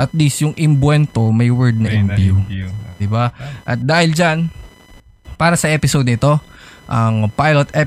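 Throughout the speech runs computer activity noise, a thin chirping buzz near 1 kHz, roughly 30 dB below the voice. Processor and peripheral load is disturbing the audio ground. Unlike steady mains hum, it shifts with the machine's activity, not with the speech.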